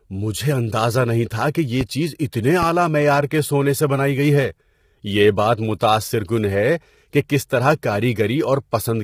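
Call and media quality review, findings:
Low-delay AAC compression throughout, likely AAC-ELD at a low rate, near 24 kbps. Coarse quantisation of frequency lines leaves speech heavily rough and grainy, with noise between harmonics and a synthetic-sounding top band.

Loud pop at 1.81 s, about 30 ms, after "نہیں تھا کہ یہ" and before "چیز اتنے". A second at 2.63 s, before "معیار کے سونے سے". A voltage step or pulse from a plug, switch, static or driver glitch is likely added to the signal. Each is a single sharp pop, roughly 10 dB then 15 dB above the speech, which continues underneath.

Pre-echo at 3.30 s, spread over 16 ms, just before "کے سونے سے بنائی". The transform block spreads quantisation noise ahead of a late attack, leaving a short hiss and a softened onset.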